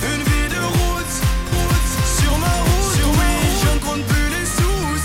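A second, likely out-of-step capture path mixes in a doubled audio track from 1.52 to 3.78 s: an equally loud, dry copy trailing by roughly 0.7 s.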